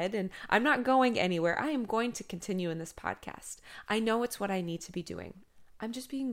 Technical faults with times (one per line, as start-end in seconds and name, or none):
none